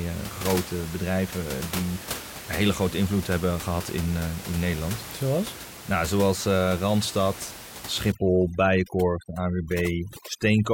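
From 8.12 s to the end at 10.74 s there's overdone noise removal: a suppressor set far too hard against room noise only about 13 dB under the speech, cutting whole bands along with quiet speech detail, so the background collapses into twinkly near-silence.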